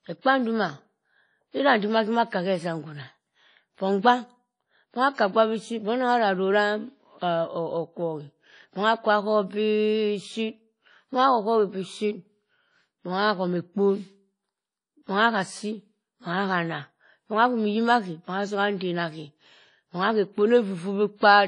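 Throughout the speech, the sound rings and turns washy, with a hiss that swells and fades alongside it, and nothing survives above about 10.1 kHz. This is likely WMA compression at a low bitrate. Long transform blocks smear quantisation noise over tens of milliseconds, and faint detail is dropped.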